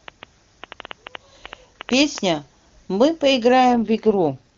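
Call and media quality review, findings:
Train of clicks, 0.08–2.19 s: irregular ticking at about 6.7 per second, around fifteen pulses, peaking roughly 10 dB above the speech. Likely interference from nearby equipment or a struggling interface.

AMR rate drop, 3.74 s to end: speech turns rougher and more synthetic with no gap or band change. This fits the AMR-WB link falling from 23.85 to 8.85 kbit/s, with bits shifted to error protection.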